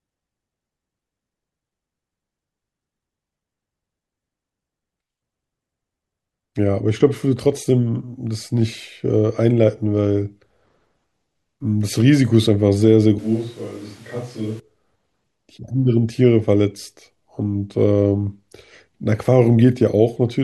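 From 13.19 to 14.60 s the close microphone's feed likely dropped out, forcing a switch to a distant microphone. The speech turns suddenly roomy and hollow, loses bass, falls about 10 dB, and carries room noise only about 25 dB below it, before snapping back.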